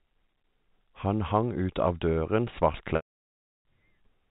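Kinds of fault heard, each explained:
Packet loss with pitch repetition: after "ut av døren", a buzzy held tone fades into a 0.69 s gap, as lost packets were bridged by repeating the last pitch period.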